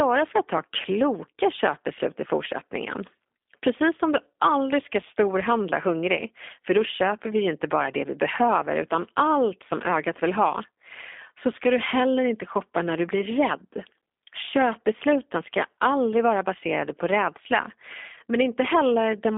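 From start to end the speech carries G.729 codec damage, plainly audible and consistent with an 8 kbit/s G.729A stream. It sits in a 250 Hz to 3.6 kHz line band, nothing above 3.7 kHz. Unlike a simple low-pass, it sounds rough and synthetic, as voicing is rebuilt from a few pulses per frame.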